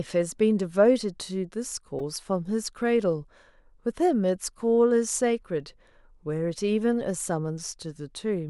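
At 1.99 s and 7.20 s, a repeated buffer: a 2.67 ms slice, fitting a 128-sample buffer, replays several times when audio arrives late, buzzing briefly instead of going silent.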